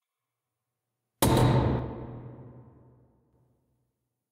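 At 1.79 s the level suddenly drops by about 6 dB and stays down until 3.33 s, when it jumps back up. That's a sudden gain jump: the digital gain switched between two adjacent samples with no fade. The background noise steps down and back up along with the everyday sound itself, which tells you it's a gain change rather than a quieter source. The likely cause is a gain setting or bit shift applied without a ramp.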